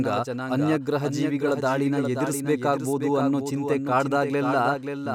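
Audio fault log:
throughout, doubled audio track: a second copy of the speech was likely picked up again through a slower path, so the same audio sits about half a second behind itself at a few decibels lower, a flat, full-band repeat with no decay or room colour.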